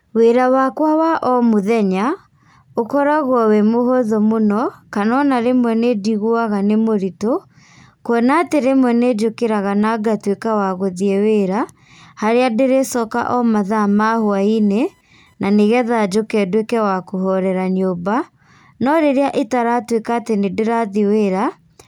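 Speech clip with computer activity noise from 13.88 to 15.88 s: a faint chirping buzz pulsing near 1 kHz, well below the speech, following the computer's load through a shared ground rather than steady mains hum.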